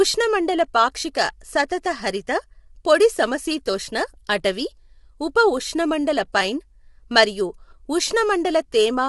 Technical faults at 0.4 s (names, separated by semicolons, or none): low-delay AAC compression